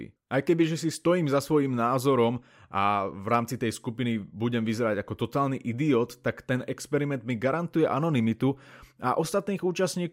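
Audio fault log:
Nothing stood out on listening to this speech recording.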